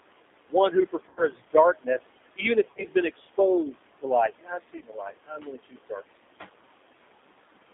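Speech, carried over a VoIP path with a noise suppressor and a G.729 codec, both of which leave audible marks from start to finish. The noise suppressor artifacts run throughout. The room noise, which sits about 14 dB under the speech, is pulled down by about 20 dB in the gaps and comes back up beneath each phrase. The G.729 codec adds plainly audible damage. The line passes only about 250 Hz to 3.6 kHz, and the 8 kbit/s model of filter, pitch and a few pulses per frame gives the voice a rough, slightly synthetic edge and makes the residual noise swirl. Speech cut by the noise suppressor appears in two stretches, 0.49 to 3.38 s and 3.71 to 6.01 s. There the suppressor treats parts of the speech as noise and turns them down with the background, by up to about 21 dB. That amounts to roughly a second of material in the first stretch and around one and a half seconds in the second, so parts of the speech sound swallowed or faint. 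VoIP packet loss concealed by the speech codec occurs three times. At 1.09 to 1.27 s, 80 ms is missing, which fits eight lost 10 ms frames. At 2.72 to 2.85 s, 60 ms is lost in scattered gaps across 100 ms, the longest gap being 40 ms. At 4.78 to 4.83 s, 30 ms is lost. In each case the decoder extends its last pitch and filter into a fading sound, and the voice stays weak and smeared briefly after packets resume.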